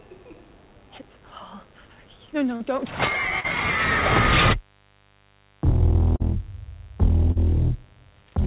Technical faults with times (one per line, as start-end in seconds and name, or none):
0.00-8.46 mains buzz
2.56-2.63 short concealed packet loss
3.40-3.47 short concealed packet loss
6.16-6.23 short concealed packet loss
7.32-7.39 short concealed packet loss